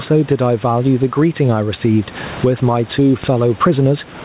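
A short speech recording carries gain pumping throughout, with the level swinging by around 15 dB, likely from excessive input gain hitting a fast limiter; the room noise sits about 29 dB below the speech. The waveform envelope looks flattened. A DC step occurs at 0.32 s and again at 3.24 s. Each shows on the waveform as a sudden baseline jump that drifts back over a fraction of a second, consistent with a 5 Hz high-pass settling, and is heard as a low thump. The spectrogram shows a bright vertical smear at the bottom at those moments. The call path leaves nothing above 4 kHz, a hard ceiling on the spectrogram that fits 64 kbps G.711 A-law telephony coding.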